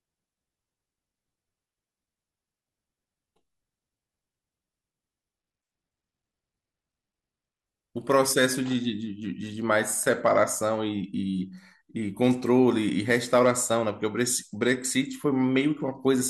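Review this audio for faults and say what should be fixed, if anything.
From 5.38 to 7.67 s a Bluetooth SBC bit pool drop dulls the treble and adds gritty quantisation noise, which fits a bit pool falling from 31 to 16, around 110 kbps. Hard clipping at 10.09 to 10.41 s and 13.11 to 13.50 s flattens peaks about 2 dB over full scale, adding crackle. Prevent these by reducing Bluetooth link congestion or using a wired path, and by lowering gain before the overloading stage.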